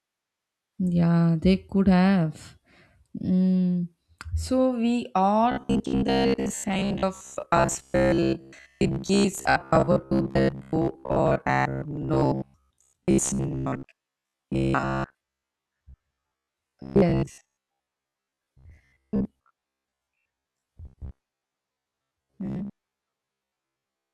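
From 5.52 s to 24.13 s, the speech turns into robotic sound from repeated short buffers. A rigid, metallic buzz near 66.8 Hz takes hold. The likely cause is audio arriving too seldom, so roughly 15 ms chunks repeat while most real audio is skipped.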